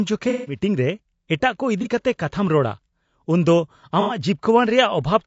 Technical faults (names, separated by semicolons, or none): low-delay AAC compression; AAC frame loss with concealment